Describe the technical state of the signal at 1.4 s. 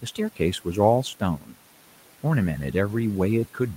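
Speech cut by the noise suppressor runs from 1.38 to 1.54 s, covering 1.4 s. The suppressor mistook a stretch of low-level speech for background and attenuated it by up to about 10 dB, so for around 150 ms the sound turns faint and swallowed.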